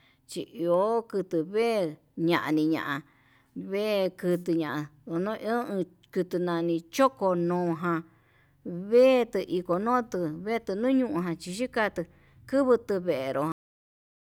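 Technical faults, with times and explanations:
13.52 s: cut-off end. The speech just stops mid-sound and falls straight to digital silence for the last 0.7 s or so, with no natural decay. The final stretch of audio was never written out, so the sound is chopped rather than finished.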